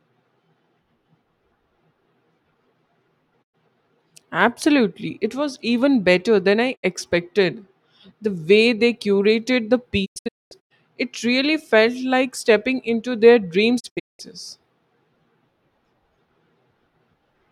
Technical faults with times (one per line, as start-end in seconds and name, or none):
3.42-3.55 digital broadcast dropout
6.75-6.85 digital broadcast dropout
10.04-10.72 digital broadcast dropout
13.79-14.21 digital broadcast dropout